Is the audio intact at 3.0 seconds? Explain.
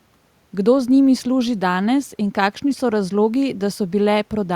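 Yes, the speech is intact at 3.0 seconds, with only room noise about 42 dB below it.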